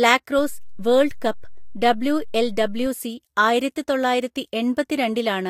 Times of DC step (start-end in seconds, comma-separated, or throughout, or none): 0.39-2.86